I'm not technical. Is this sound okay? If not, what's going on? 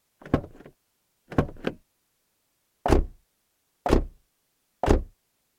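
No. From 2.99 to 3.04 s there's a brief, deep thump that fades within about 12 milliseconds. This is a phantom power thump: power to the microphone input was switched while it was live, and that sudden electrical jolt came through as a low bump.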